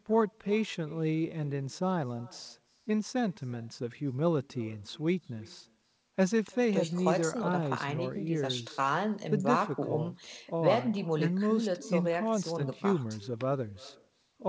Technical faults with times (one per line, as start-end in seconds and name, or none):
0.00-14.48 echo with no canceller